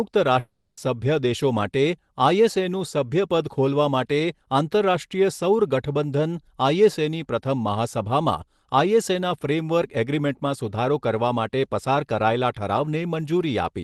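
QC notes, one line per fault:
0.39–0.79 s, long network dropout: sound cuts out, filled by a fading buzz for about 0.38 s, then brief silence; likely packet loss. Spectrogram shows smeared tonal band decaying to a gap.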